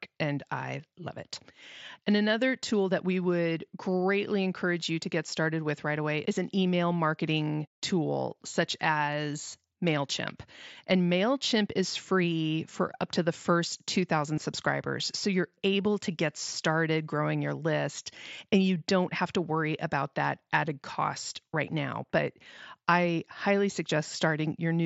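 A speech recording passed through a Bluetooth headset link, with wideband mSBC coding that leaves a light grain on louder sounds. There is one fault: concealed Bluetooth headset packet loss at 14.36 s. About 15 ms of audio never arrived, which fits two lost packets. The receiver filled the gap by repeating a closely matching stretch of the preceding waveform.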